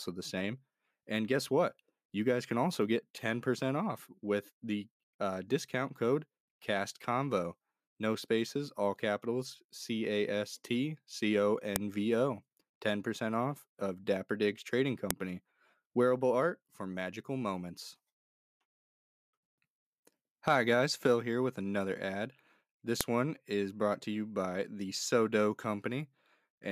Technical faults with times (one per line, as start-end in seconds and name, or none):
11.76 file header played as audio
15.11 file header played as audio
23.01 file header played as audio